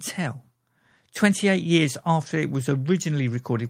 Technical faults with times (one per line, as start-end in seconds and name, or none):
none